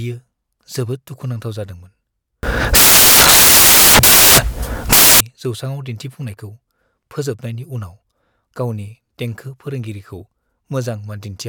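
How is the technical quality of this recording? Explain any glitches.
The recording has one serious glitch. From 2.43 to 5.20 s, the speech turns into loud, harsh broadband noise caused by samples built from the wrong bytes. The decoder assembled each sample with misaligned or swapped bytes, so the rapidly changing low-order bits became the dominant values.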